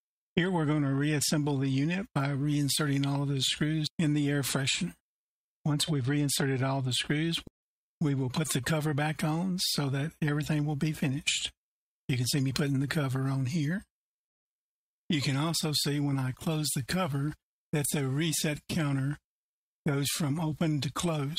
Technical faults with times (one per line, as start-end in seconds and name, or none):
none